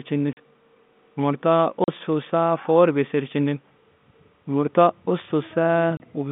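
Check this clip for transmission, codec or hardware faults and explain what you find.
The speech carries one transmission fault, heard three times, over a telephone-band G.711 line. Packet loss filled with silence occurs at 0.33–0.37 s, 1.84–1.88 s and 5.97–6.00 s. The receiver substituted silence for the missing audio, leaving 40, 40 and 30 ms holes, consistent with 10 ms packets, with hard edges.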